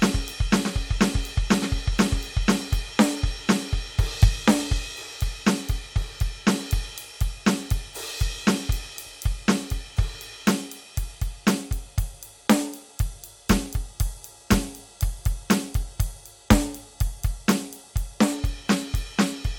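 Music clip, no faults heard.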